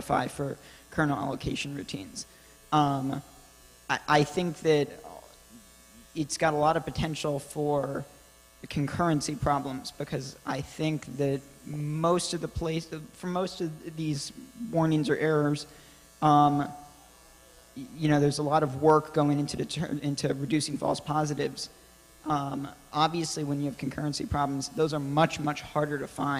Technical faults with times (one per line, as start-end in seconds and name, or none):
8.73 DAB burbling
11.74-11.80 DAB burbling
19.57-19.63 DAB burbling
21.54-21.74 DAB burbling